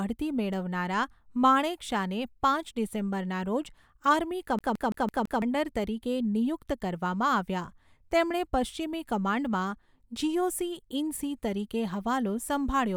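From 4.59 to 5.42 s the speech sticks like a CD stuck on one turn. A scratch keeps throwing the laser back one track, so the same 167 ms slice of audio repeats five times, each pass cut by a brief mute at the jump, giving a fast, even stutter.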